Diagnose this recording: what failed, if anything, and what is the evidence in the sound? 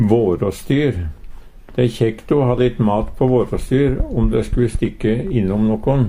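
Nothing in this recording points to a failure at any stage of the chain. No dropout, glitch or distortion can be heard to pin on wiring, conversion, buffering, processing, transmission, storage or playback.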